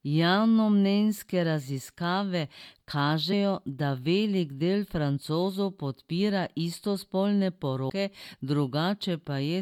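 At 3.32 s, just before "da velik del", and at 7.89 s, after "podpira istospolne", compressed frames get skipped: a few lost frames drop about 50 ms, then nearly 200 ms, so the speech jumps ahead.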